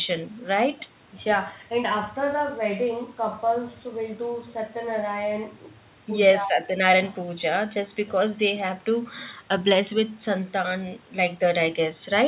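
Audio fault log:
No faults are present; the speech is carried over a WebRTC call path whose narrowband sound, with nothing above 4 kHz, fits G.711 mu-law coding at 64 kbps.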